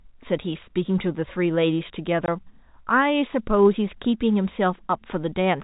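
At 2.26 to 2.28 s the speech drops into a 20 ms hole with hard edges: packet loss filled with silence, fitting one lost packet replaced by nothing.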